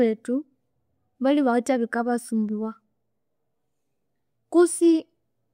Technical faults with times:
none

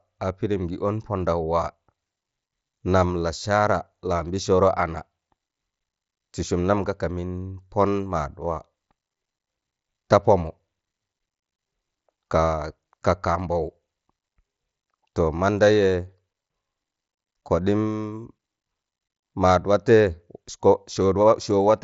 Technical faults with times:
none

